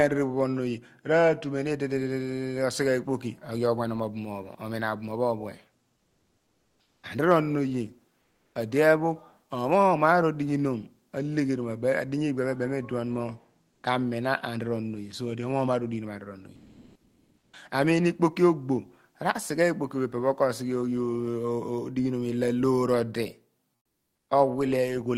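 In the pauses at 5.99 to 7.03 s, 8.23 to 8.55 s, 13.75 to 13.83 s and 16.55 to 17.51 s, the background turns flat and featureless. It shifts by about -6, +2, 0 and +2 dB. This is comfort noise in place of the background, likely from discontinuous transmission filling the gaps with synthetic noise.

From 17.47 to 17.51 s the next sound begins abruptly, with 40 ms of its soft start missing. This is an onset clipped by the voice detector: the detector was likely late to register returning sound, so comfort noise covered that opening.

From 23.75 to 24.27 s, the background again becomes a smooth, characterless hiss, about 3 dB quieter. This is the same comfort noise substitution, lasting 520 ms, until sound resumes.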